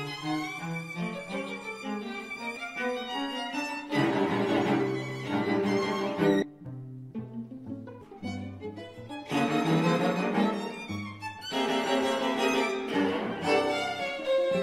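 Damaged data in the compressed stream makes the decoder misread frames, lose sync and hunt for the next header. Each time this leaves a brief glitch, at 2.56 s, from 6.39 to 6.43 s, at 8.01 s and at 11.45 s. From 5.28 to 6.66 s, channel delay lags one channel by about 10 ms before the mix is summed to mono. The resulting comb filtering cancels content at evenly spaced frequencies, starting near 50 Hz, so the audio turns hollow and phasey.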